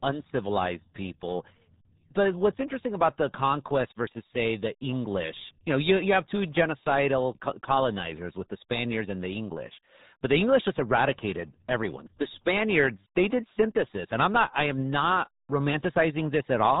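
From start to finish the speech carries the damage of the RealAudio 14.4 codec, the old dial-up speech coder, and the heavy smearing points to a stream of about 8 kbit/s. Everything above 3.8 kHz is gone, so consonants lose their bite and the voice sounds muffled and gargly. On a spectrogram the energy stops at a flat ceiling near 3.8 kHz with empty space above, and the formants underneath look blotchy and coarsely stepped.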